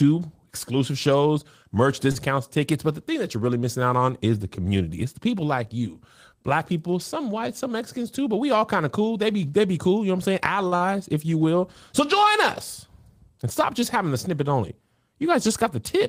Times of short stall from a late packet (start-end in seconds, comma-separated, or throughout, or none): 2.11-2.18, 10.67-10.75